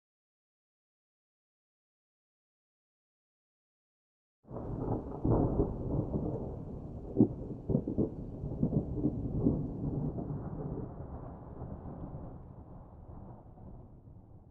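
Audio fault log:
Nothing to log here; I listened all the way along and didn't hear a single fault anywhere in this audio.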